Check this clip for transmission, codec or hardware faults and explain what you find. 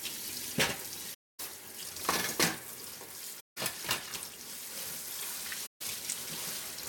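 The sound drops into three soft-edged silences, at 1.13 to 1.40 s, 3.40 to 3.58 s, and 5.66 to 5.81 s, each fading out and back in. This is AAC frame loss with muting. The decoder zeroed the missing frames, and the overlapping windows smoothed the edges. The gaps span roughly 256, 171 and 149 ms.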